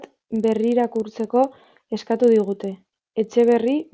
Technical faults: resampler restarted on every block

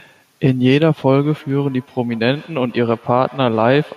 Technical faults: feedback echo between two devices; dropped samples

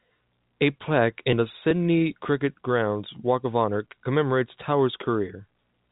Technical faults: none

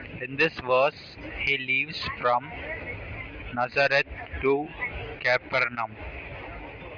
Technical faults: none

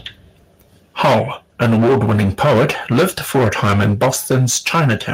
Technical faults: microphone overload; microphone volume stepped down

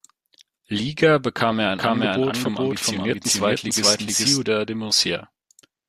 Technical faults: doubled audio track

